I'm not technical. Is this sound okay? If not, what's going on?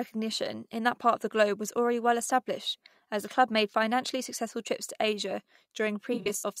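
No. Near the end, from 6.13 to 6.43 s, the speech turns smeared or noisy. This is AAC frame loss with concealment. Small chunks of audio went missing, the longest under a tenth of a second, and the player patched each gap with guessed sound.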